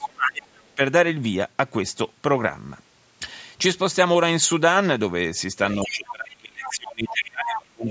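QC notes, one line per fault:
0.00–0.55 s and 0.76–0.80 s, speech suppressed in double talk. The talker's voice sinks sharply at the start, by about 30 dB at worst, then dips briefly by about 10 dB. The likely cause is an echo canceller ducking the near talker while the far side also spoke.
0.02–0.06 s, other side's voice leaking through. A short scrap of a second voice sits under the opening, about 10 dB below the talker. It likely comes from loudspeaker playback that the echo canceller failed to subtract from the microphone signal.
5.83–7.88 s, speech suppressed in double talk. For roughly two seconds near the end, the talker fades, dropping by about 30 dB at the deepest point. This is likely the canceller turning down both its talker and the echo while both sides talk over each other.
5.73–5.91 s, 6.63–6.76 s, 7.08–7.15 s and 7.47–7.58 s, other side's voice leaking through. Brief fragments of the far voice surface, about 15 dB below the speech, rising to about 10 dB below in the last one. 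Residual loudspeaker echo likely slipped past cancellation.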